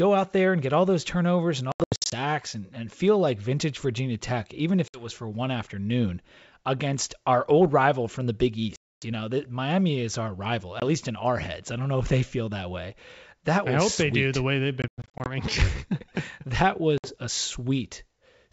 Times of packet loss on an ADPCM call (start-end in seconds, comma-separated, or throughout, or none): 1.72-2.14, 4.88-5.07, 8.76-9.06, 10.80-10.83, 14.82-15.29, 16.98-17.15